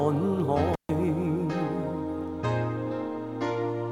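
The sound drops out from 0.73 to 0.90 s with an intermittent contact fault: a loose cable or plug briefly opens for about 139 ms. Scratchy crackle at both edges and faint hiss underneath distinguish it from a clean digital dropout.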